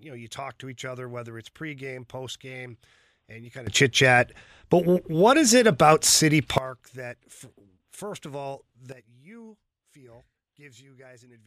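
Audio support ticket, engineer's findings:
Sudden gain jump at 3.67 s, right after "postgame and you kind". Speech and noise floor step up about 18 dB together, dropping back at 6.58 s. Again at 8.92 s after "first of all", down about 12 dB to the end. Likely an unramped digital gain change.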